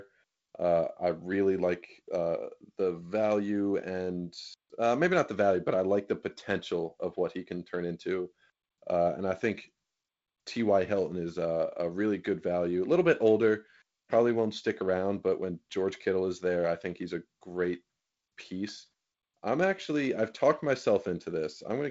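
No faults: the speech is on a G.722 wideband telephone path whose slightly noisier lower band fits the 48 kbit/s mode, with nothing above 7.7 kHz.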